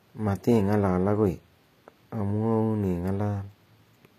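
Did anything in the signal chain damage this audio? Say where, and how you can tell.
Yes, at the codec stage: the s sounds are gritty and lispy throughout, likely HE-AAC compression faking the treble by band replication, which fits a 24 kbps stream.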